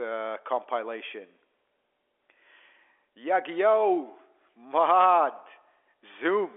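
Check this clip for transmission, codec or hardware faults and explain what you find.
No transmission, codec or hardware faults can be heard: the speech sits in the usual 300 Hz to 3.4 kHz telephone band of G.711 coding, with nothing above about 3.7 kHz, which fits a standard 64 kbps A-law line.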